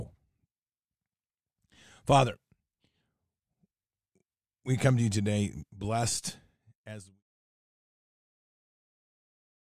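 No technical faults can be heard in this speech recording. Near the end the level eases down in a smooth editorial fade-out, beginning at around six and a half seconds and reaching silence at 7.23 s with no click or hard edge.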